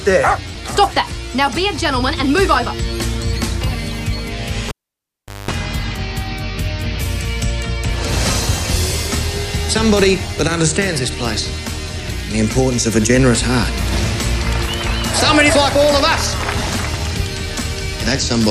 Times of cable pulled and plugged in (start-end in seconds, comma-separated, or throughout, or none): 4.68-5.51